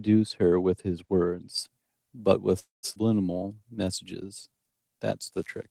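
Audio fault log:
1.58 to 5.7 s, pre-emphasis left on: from here to the end the treble stands about 10 dB too high at 10 kHz relative to 1 kHz, a 50 microsecond FM-style boost whose matching de-emphasis was never applied, so the speech turns thin, bright and hissy on sibilants.
2.59 to 2.85 s, call audio freeze: the sound stalls for about a quarter of a second, the last fragment stretched into a fading buzz that drops to silence for roughly 160 ms, likely packets held up until the jitter buffer emptied; speech then resumes exactly where it stopped, nothing lost.
2.95 s, skip ahead: playback jumps forward with a tiny 7 ms join, dropping roughly a fifth of a second of speech, as a stretch was dropped while later audio was already waiting, so the two sides meet almost directly.
3.38 to 4.89 s, jitter buffer slow-down: speech runs at about 90% speed with unchanged pitch, 165 ms added by repeating single pitch periods and bits of pauses to rebuild the buffer's reserve, leaving sounds drawn out.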